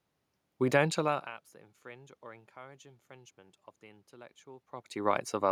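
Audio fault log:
No system faults found in this speech clip; the room noise and the level shifts near 1 s and 4.5 s, where the talker moves relative to the microphone, belong to the recording itself.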